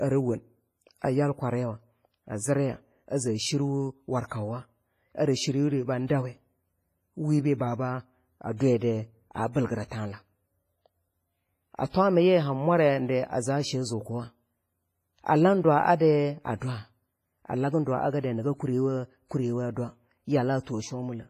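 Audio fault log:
throughout: WMA compression. The speech sounds washy and ringing, with a hiss that swells and fades along with the voice and nothing above 15.4 kHz. This is likely a transform codec at a low bitrate, near 24 kbps, with heavy damage: quantisation noise smeared across long blocks and weak detail zeroed.
6.07 to 6.10, 8.57 to 8.60, 9.53 to 9.55, 11.90 to 11.94 s: pre-echo. A brief hiss runs ahead of sharp onsets, lasting 27, 35, 25 and 43 ms respectively, so each attack sounds blunted and smeared. The codec spreads noise meant for the loud attack back over the quiet moment before it within the same block.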